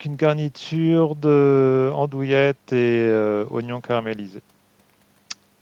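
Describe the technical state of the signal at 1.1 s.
At 1.1 s the speech signal is intact, with no dropout, distortion, clicks or other technical fault audible at that moment.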